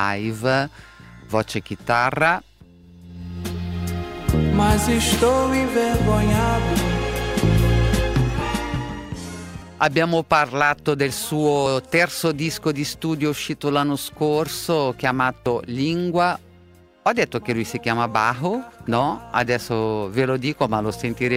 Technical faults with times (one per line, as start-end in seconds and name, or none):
9.62 dropped buffer (overrun)
11.66 dropped buffer (overrun)
15.46 dropped buffer (overrun)